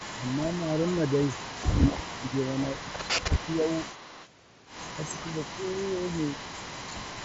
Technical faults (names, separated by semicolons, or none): speech suppressed in double talk; echo leak